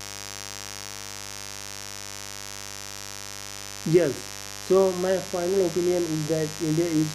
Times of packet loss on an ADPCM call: none

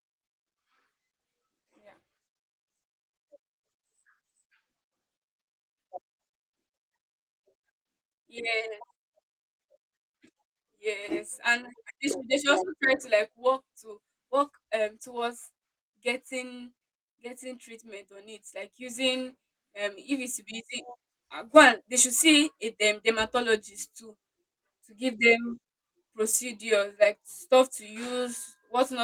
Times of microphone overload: none

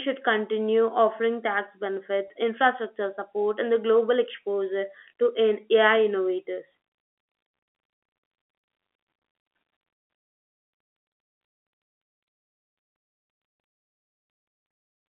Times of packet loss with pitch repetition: 2.28-2.30

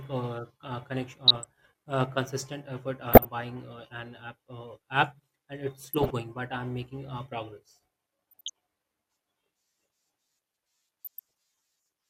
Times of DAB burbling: 1.28-1.49, 3.07-3.25, 5.82-6.10, 8.31-8.50, 11.04-11.19

